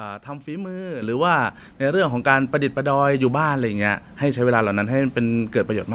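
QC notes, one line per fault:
1.02 s and 2.04 s, microphone volume stepped up: the speech and the background noise floor jump together in one instant step, about 8 dB and then about 2 dB, with no gradual ramp. This points to the input gain being raised in steps rather than the speaker moving closer. Throughout the clip, the band stops at 4 kHz, as a narrowband call path would.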